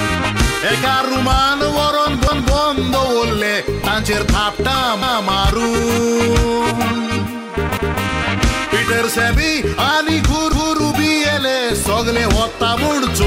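At 2.27, 5.02, 7.77 and 10.52 s, overlapping chunks replay the previous 250 ms of audio, each repeat ending 0.25 s later. Consecutive 2.5 s blocks start before the prior block finishes, so every join produces a brief stutter recurring at 2.75 s spacing.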